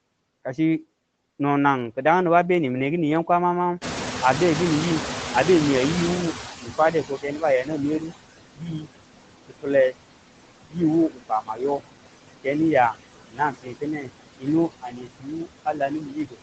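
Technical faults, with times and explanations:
Throughout, noise suppressor artifacts: the suppressor pulls down bands it judges to be steady noise by about 21 dB, so the noise sinks between the words and rises under them.
3.81–8.04 s, noise suppressor catching up: after "kini yam kwama mangu", room noise jumps by about 21 dB, leaks through, then sinks over roughly 4.2 s as the estimate adapts.
6.62–8.12, 8.55–8.88, 9.48–9.96, 10.67–10.78, 11.09–11.81 (before "ke niya"), 13.28–14.48 (after "ke niya"), 14.81–16.42 s, speech cut by the noise suppressor: it mistakes speech for noise, so quiet parts drop by about 20–21 dB and sound swallowed.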